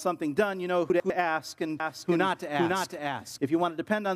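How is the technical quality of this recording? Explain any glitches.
Two glitches stand out: a brief scrambled moment near the one-second mark and a stretch where the sound is heard twice.

From 0.9 to 1.1 s there are chunks out of order. One 100 ms chunk arrives a chunk late and plays after the piece that should follow it. Nothing goes missing, but the sequence briefly jumbles, with hard joins where the pieces meet. A dropout would leave a gap, and a stutter would repeat material. Here all the audio is present, only misordered.

From 1.80 to 3.38 s a doubled audio track appears. A second copy runs roughly half a second behind at about the same loudness, most likely from the signal being captured again along a slower path. The copy is full-band, with no decay or room colouring, and it cuts in and out abruptly at those boundaries. A real echo or reverb would fade, soften and repeat, so this is a flat duplicate rather than any acoustic reflection.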